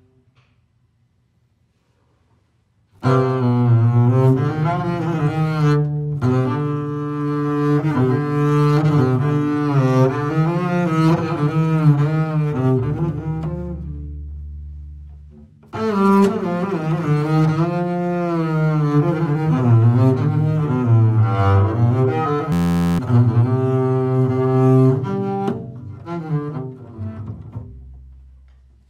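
A system hang loop runs from 22.52 to 22.99 s. The machine or its driver stalled while the sound hardware kept replaying the same stretch of its ring buffer, so one 11.61 ms fragment repeats exactly 40 times. At that length the repetition fuses into a steady buzz at about 86.1 Hz rather than a stutter. The loop size fits a 512-sample buffer, and around half a second of the real audio never arrives.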